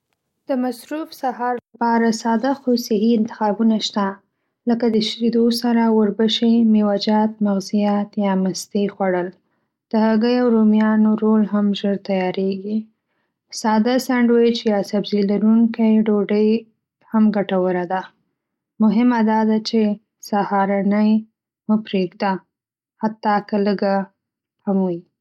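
No technical faults are audible anywhere in this recording.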